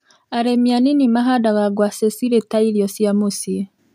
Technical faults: automatic gain rising

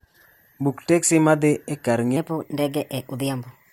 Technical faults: section at the wrong speed

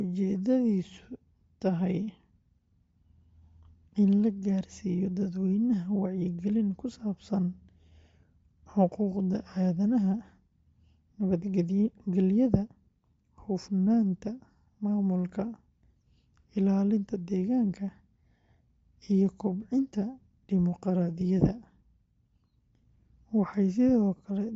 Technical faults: Bluetooth LC3 compression

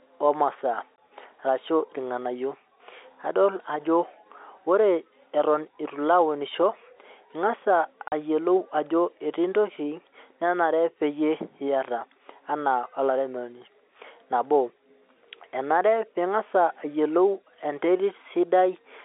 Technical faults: packet loss filled with silence

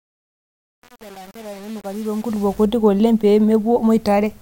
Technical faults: truncation distortion on a fade

